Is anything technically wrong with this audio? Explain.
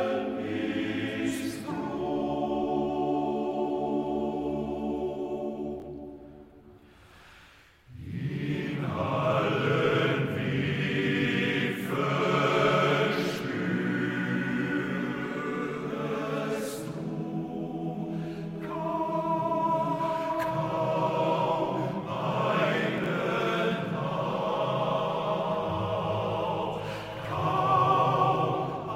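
Yes, there are chunks out of order at two points. The audio travels in 20 ms blocks, and twice a block arrived late and was played after blocks that belonged behind it. At 5.80 to 5.84 s one block lands a single slot late. At 22.98 to 23.06 s one lands three slots late. Nothing is lost, but each swap creates hard joins, heard as a brief jumbled moment.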